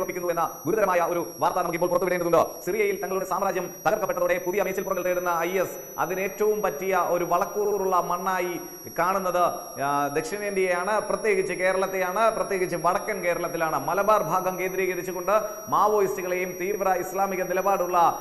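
A thin, high whistle sits under the whole clip. Its pitch wanders between about 5.6 and 5.9 kHz instead of holding steady, and it runs well below the main sound, roughly 20 dB down. This is switching supply whistle: a switching power supply has dropped into an audible burst mode, or is beating against another supply, and its drifting frequency leaks into the audio path.

From the start to 5.06 s the audio feels choppy and rushed, moving about 1.7 times faster than normal while its pitch stays put. The pace then changes abruptly to normal. This points to a time-stretched section, likely software squeezing that stretch to fit a shorter length by dropping short slices of audio rather than resampling, which keeps the pitch but breaks the flow.

At 7.65 to 7.78 s there is a quick stutter. A short slice plays again. This is repeated frames: the decoder received the same compressed data more than once. 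Here a 64 ms chunk comes back twice, adding 128 ms to the running time. The same fault returns at 16.74 to 16.77 s, this time as a single extra 32 ms repeat that sounds like a brief hiccup.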